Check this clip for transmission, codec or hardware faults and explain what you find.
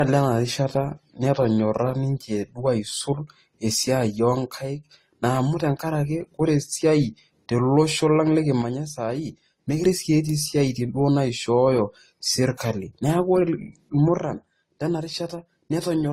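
Two faults are present: compression damage across the whole speech clip, and three episodes where the level falls abruptly.

Transcoding between lossy codecs runs throughout. Nothing remains above 15.7 kHz, and two different kinds of coding artefact sit together. This is likely a chain of encoders, consistent with AAC-LC and then Opus at low bitrates, the second encoder spending bits re-encoding the first one's damage.

One channel drops out from 4.61 to 4.85 s, from 8.62 to 9.84 s, and from 14.19 s to the end at 16.12 s. Each time the level falls suddenly by about 6 dB, the likely cause being loss of one stereo channel, so the mono sum carries only half the shared signal.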